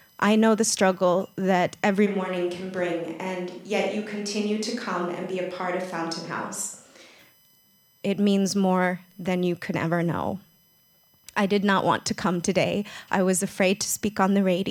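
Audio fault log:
throughout USB whine: a fixed-pitch whine built on 1 kHz, loudest around its 12 kHz multiple, about 35 dB under the speech; USB frame current leaking into the audio ground.
2.08–7.17 s switch to a distant microphone: speech turns roomy and hollow, thinner in bass, about 5 dB quieter, with more room noise; likely the close microphone dropped out, leaving a farther one.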